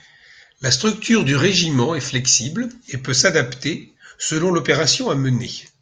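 No technical faults are audible.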